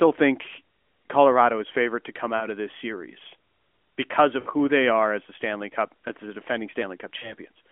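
Lost AMR speech frames: corrupted radio frames forced the decoder to reuse the last good pitch and vocal-tract settings at falling gain. After "is favorite to come" (2.36–2.48 s), after "of this series because" (4.40–4.48 s) and after "as the defending" (7.18–7.34 s), the speech smears, warbles and fades, each gap consistent with two or three 20 ms frames.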